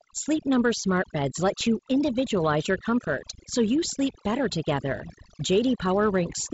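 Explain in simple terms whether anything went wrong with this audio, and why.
Overdone noise removal runs throughout: the cleaner stripped faint speech with the hiss, so pauses twinkle.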